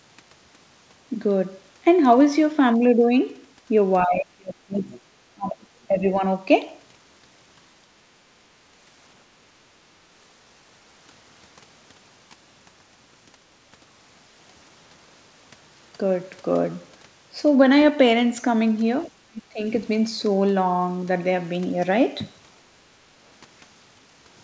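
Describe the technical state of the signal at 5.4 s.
At 5.4 s you're inside a stretch of speech suppressed in double talk, running 5.34 to 5.59 s. The speech sags hard, dipping by about 25 dB at its deepest, likely because the echo canceller mistook overlapping talk for echo and squashed both.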